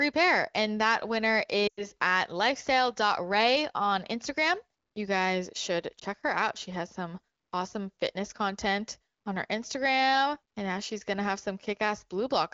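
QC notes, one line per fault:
1.67–1.86 s, lost AMR speech frames: just after "that winner" the sound drops to near silence within two frames, then returns thin and rough. Radio errors spoiled about 100 ms of the wideband stream, which fits five 20 ms frames, and the decoder kept repeating the last good pitch and vocal tract settings at falling gain.
5.99–6.04 s, lost AMR speech frames: a brief dip after "guys should", recovering by "her out". This fits a single lost frame, bridged by the decoder's concealment.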